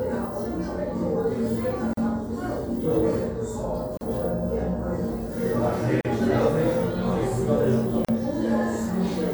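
Gaps at joins of encoded pieces occur at 1.93–1.97, 3.97–4.01, 6.01–6.05 and 8.05–8.09 s, repeating every 2.0 s. Separately encoded two-second pieces were joined with their encoder delay and last-frame padding left in, so roughly 38 ms of silence briefly interrupts the sound before it resumes.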